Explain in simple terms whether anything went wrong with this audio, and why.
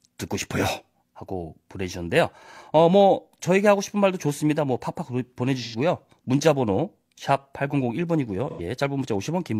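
AAC frame loss with concealment: at 5.64–5.75 s and 8.50–8.61 s, compressed audio chunks went missing and the decoder guessed, leaving brief smeared, noisy patches.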